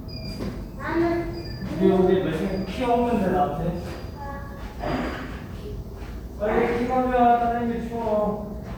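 The clip is a recording of sounds. Nothing technically wrong can be heard in it.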